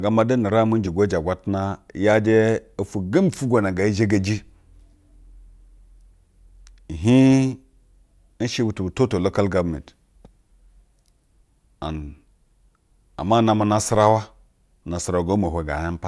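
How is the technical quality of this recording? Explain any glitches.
Nothing stood out on listening to this speech recording, and there were no glitches to explain.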